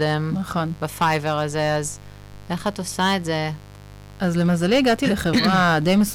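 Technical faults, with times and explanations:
Throughout, mains buzz: a steady, raspy buzz sits about 20 dB below the speech, built on 50 Hz and its harmonics reaching into the kHz range. Sharp switching spikes twice per mains cycle give it an edge, unlike the smooth, pure tone of plain hum.
Throughout, hard clipping: the speech is driven about 8 dB past what a stage could pass, so a few percent of samples have their peaks cut flat. That adds harsh distortion on loud peaks, unlike the buzz, which stays constant through pauses.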